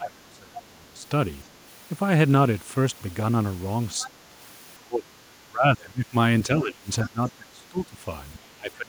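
From 0 to 1.03 s the speech drops by around 20 dB. This is speech suppressed in double talk. Both ends likely spoke at once, and the echo canceller turned the near talker down along with the echo. At 1.46 to 1.51 s a faint second voice slips in, far below the speech. This is the other side's voice leaking through. The echo canceller likely left some loudspeaker sound in the microphone signal. It returns at 3.99 to 4.08 s, much louder this time. The suppression then repeats at 4.04 to 4.34 s, 4.8 to 5.28 s, 5.44 to 6.14 s, 6.47 to 7.99 s and 8.36 s to the end. Each time the speech dips or breaks up, sinking by about 20 to 25 dB at its deepest.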